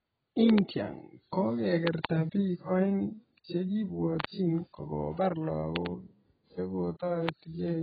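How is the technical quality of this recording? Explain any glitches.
The recording has heavy codec damage throughout and nine loud pops, so its technical quality is poor.

AAC compression, throughout: the speech sounds heavily dull and smeared, with nothing above 4.9 kHz. This likely comes from AAC-LC coding at a very low bitrate, around 14 kbps.

Loud pops, at 0.50–0.60, 1.87–2.07, 4.20–4.27, 5.76–5.88 and 7.29–7.31 s: there are sharp double pops in the first four spans and a single pop in the last, each roughly 20 dB above the speech, which continues underneath. The likely cause is sudden voltage pulses added to the signal.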